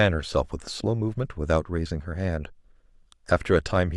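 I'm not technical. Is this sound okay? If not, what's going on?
Yes, it's fine: nothing goes wrong with the sound anywhere in this recording, so there's nothing here you need to worry about.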